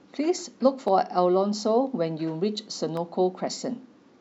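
Dropped buffer (overrun) at 0.88 s and again at 2.97 s in this speech clip: each is a point where the sound jumps ahead by roughly 5 ms with no gap, likely because the capture software fell behind and the hardware overwrote a block before it was read.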